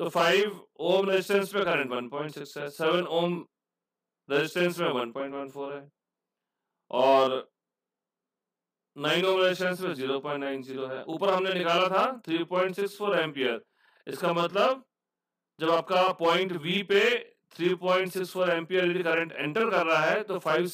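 One channel arrives late throughout the clip, held back by about 40 ms, and the two channels are then summed to mono. That is channel delay, heard here as doubling. Because the late copy sits at the same level as the original, every sharp onset is heard twice in close succession. The result is a thickened, slightly smeared sound with a short slap-like repeat trailing each attack, which fits a long buffer on one side.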